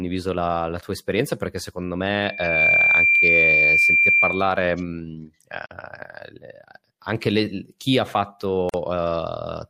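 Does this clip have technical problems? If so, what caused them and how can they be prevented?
Yes. From 2.21 to 4.61 s there's a loudspeaker feedback squeal at 2.4 kHz. The mic hears its own speaker and the loop gain tops one there, so the tone swells over about 0.4 s to roughly 10 dB above the speech. Keep mics out of speaker coverage and trim gain or notch that frequency.

At 5.66 s (47 ms) and 8.69 s (45 ms) you get a gap at a join of encoded pieces. Separately encoded chunks kept their start delay and end padding, so the speech drops out briefly and resumes. Trim encoder delay and padding, or encode gaplessly.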